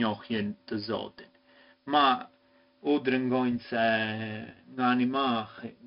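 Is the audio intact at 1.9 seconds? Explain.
No. At 1.9 seconds, as throughout the speech, 4-bit ADPCM compression applies: each sample is coded as a coarse 4-bit step from a prediction, leaving a gritty hiss that rides the speech level. Nothing sounds above 5.3 kHz, consistent with roughly 44 kbps. Unlike MP3 artefacts, there is no swirly, warbling smear.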